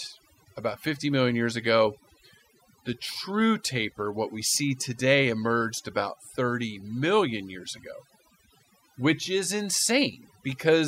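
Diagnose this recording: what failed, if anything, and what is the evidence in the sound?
Overdone noise removal runs throughout the speech, a call-processing fault. Between phrases the background falls to near silence sprinkled with twinkling specks. An over-aggressive suppressor is cutting any band near its noise estimate, taking quiet speech detail with it.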